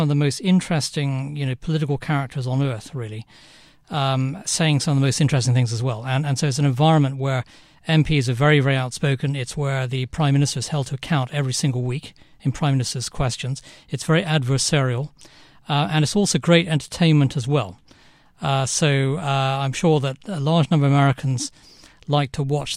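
No technical faults can be heard anywhere in the recording, and the signal holds steady throughout.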